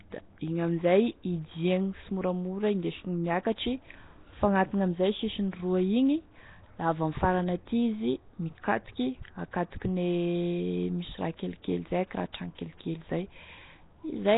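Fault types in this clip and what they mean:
Nellymoser compression: The speech carries a rough, hissy halo and a smeared, underwater quality, and nothing is present above about 3.8 kHz, which fits a narrow-band coder running near 16 kbps. The likely cause is the Nellymoser Asao codec from Flash, which codes short blocks at a fixed low bit budget, gives weak bands no bits and fills them with noise. Here the damage is heavy and persists for the whole clip.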